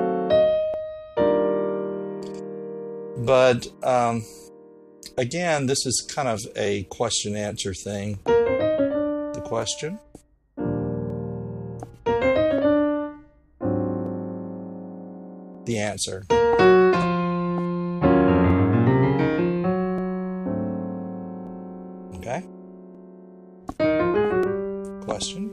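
From 0.74 s to 24.43 s, a click recurs every 1.48 s, about fifteen in all. These are likely clock drift buffer slips: two clocks differing by roughly 500 ppm force a short block of samples to be dropped or repeated. Unlike random dropouts, their spacing never varies.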